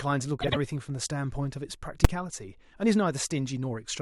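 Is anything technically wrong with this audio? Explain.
Yes, two things. Around 0.41 to 0.57 s there are frames out of order: two neighbouring chunks got decoded swapped, so that speech garbles into a flutter. At 2.05 s there are invalid numbers at full scale: a roughly 5 ms block of bad values got pinned to maximum, heard as a single loud bang.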